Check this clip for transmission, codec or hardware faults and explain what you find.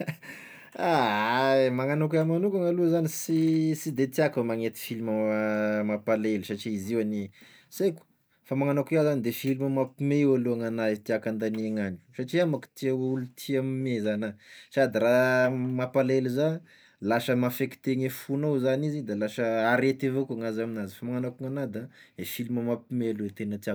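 Checking this clip turns up no faults to explain.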